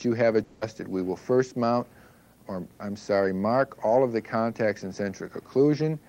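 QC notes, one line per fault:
0.43 to 0.63 s, long network dropout: The sound stops for about 0.2 s. A fading buzz fills roughly 180 ms of the gap, with no true silence. The audio then resumes later, with that stretch missing. Likely a run of undelivered packets, concealed by the receiver.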